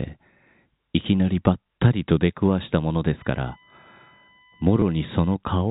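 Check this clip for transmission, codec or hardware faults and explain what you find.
Two faults are present: a USB whine and a brief packet loss with last packet repeated, heard over telephone-band G.711 audio that stops at 4 kHz.

USB whine runs from 3.18 to 5.35 s. Current drawn in 1 ms bus frames leaks into the audio path through power or ground, giving a fixed 1 kHz tone with its strongest component at 2 kHz, roughly 35 dB below the speech. On a spectrogram it shows as steady horizontal lines at 1 and 2 kHz.

Packet loss with last packet repeated occurs from 4.80 to 4.82 s. About 20 ms of audio was lost, which fits two 10 ms packets, and the receiver replayed the previous packet to fill the gap. This is heard as a short robotic stutter. The waveform shows a copied segment, with a possible discontinuity at the join.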